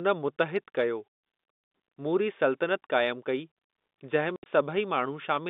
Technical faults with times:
4.36-4.46 packet loss filled with silence

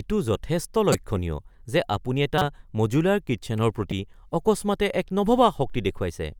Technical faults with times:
0.92-0.95 corrupt frame decoded
2.38-2.45 corrupt frame decoded
3.91 corrupt frame decoded

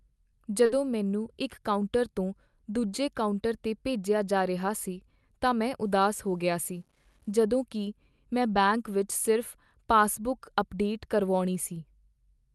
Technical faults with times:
0.65-0.71 short concealed packet loss
5.83-7.33 low bit depth without dither
8.53-8.57 short concealed packet loss

